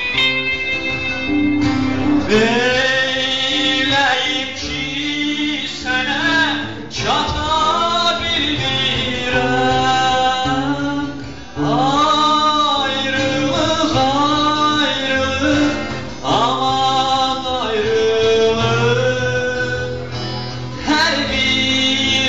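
At 2.23 to 2.29 s and again at 4.09 to 4.15 s the audio lurches forward. These are compressed frames skipped: whole coded blocks never reached playback, so the sound resumes further on. The first gap loses around a tenth of a second and the second about half that, which points to two frames and then one, each 46.4 ms long.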